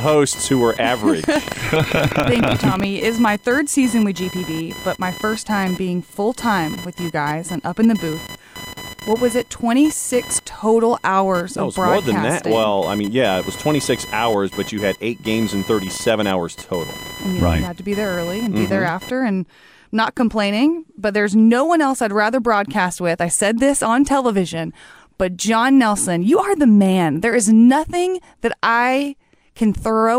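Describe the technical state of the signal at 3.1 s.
Computer activity noise runs from 0.0 to 19.1 s: processor and peripheral load disturbs the shared audio ground, adding a chirping buzz near 1 kHz, roughly 15 dB under the speech, until "and not complaining but".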